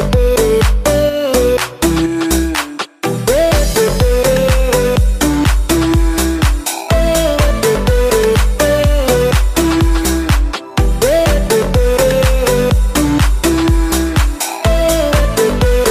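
No technical faults can be heard anywhere in the audio. Nothing in the sound points to a problem in how it was captured, carried or reproduced.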